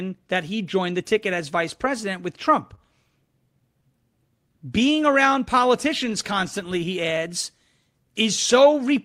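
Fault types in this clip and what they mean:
Clock drift between sender and receiver: the sending end's clock runs roughly 2% slow, so the receiver keeps running short and patching the timing all the way through.
Repeated timing corrections: from 0.50 to 8.97 s the receiver stretches things out to play at 99% speed, adding around a tenth of a second in small, uneven hiccups.
Short stall from a late packet: at 2.75 to 2.79 s a packet shows up late, so about 20 ms of sound gets held over, with nothing lost.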